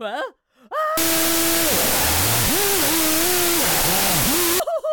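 From 0.97 s to 4.60 s there is a wrong sample width fault: loud, harsh noise with the original sound buried, running at half speed and an octave low. This fits 32-bit float data read as 16-bit integers, splitting each sample into two values.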